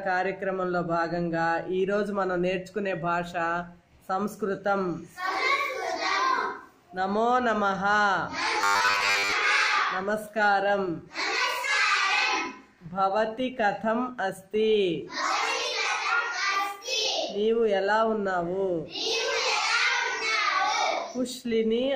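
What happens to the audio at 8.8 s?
From 8.61 to 9.32 s the sound becomes a rigid, metallic 100 Hz buzz: robotic sound from repeated short buffers. The likely cause is a roughly 10 ms slice being looped while most of the real audio is skipped. Unlike a dropout, there's no silence, just a fixed-rate buzz.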